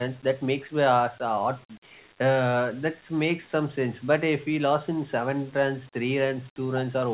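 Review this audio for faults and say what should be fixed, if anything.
From 1.67 to 2.0 s the room background dips by about 9 dB for roughly a third of a second, then returns. This is background gated by the echo canceller: while far-end audio played from the loudspeaker, the canceller pulled the microphone gain down hard, taking the ambience with it. To prevent it, lower the canceller's suppression depth or add comfort noise so the residual background stays steady during far-end playback.

At 6.73 to 6.79 s the talker's level briefly drops by around 10 dB for about 50 ms. The likely cause is speech suppressed in double talk: with both sides active, the canceller could not separate near-end speech from loudspeaker echo and attenuated both. To prevent it, improve double-talk detection so the canceller holds back suppression when near-end speech is present.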